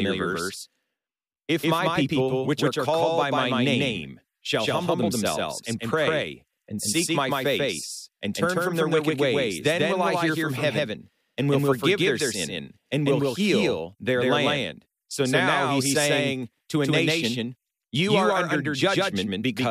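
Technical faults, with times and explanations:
Throughout, doubled audio track: the signal is most likely reaching the mix twice, either captured again through a slower second path or held as two misaligned copies in an edit. A full-band duplicate trails the speech by roughly 150 ms at about the same level as the original. Each syllable is followed by a clean, equally loud repeat with no decay or room colour, giving a crowded slapback effect that blurs consonants across the whole clip.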